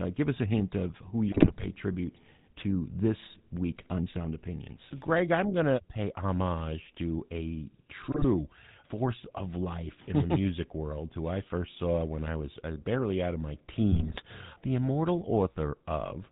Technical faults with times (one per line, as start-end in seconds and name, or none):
0.00-16.32 GSM full-rate codec
1.32-1.65 GSM bit errors
8.09-8.25 GSM bit errors
13.92-14.22 GSM bit errors